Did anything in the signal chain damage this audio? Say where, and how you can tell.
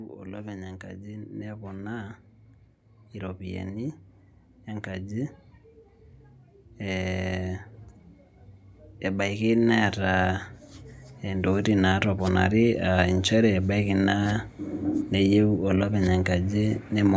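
Yes. Automatic gain rising in the call processing stage lifts the level by about 7 dB between 9.02 and 12.51 s. The control judged the input too quiet and turned its gain up slowly over those three and a half seconds. You can tell it apart from a talker moving closer because the background noise swells along with the speech at the same rate, and the tone colour stays constant rather than gaining proximity bass.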